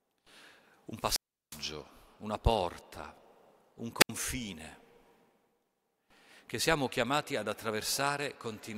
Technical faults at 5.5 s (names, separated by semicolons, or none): none